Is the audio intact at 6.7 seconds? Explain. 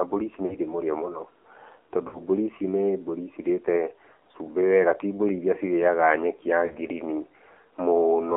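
No. Lost AMR speech frames hit 6.66 to 6.77 s, a gap of about 40 ms that fits two missing 20 ms frames. The decoder fills the hole by repeating its last good pitch and vocal-tract settings at falling gain, so the speech briefly smears and dips before recovering a little rough.

That moment also carries the AMR narrowband mobile codec heard throughout the clip. The audio is confined to roughly 250 Hz to 3.5 kHz, and the plainly buzzy, synthetic quality suggests a low mode around 7.4 kbps, with few pulses per subframe to model the voice.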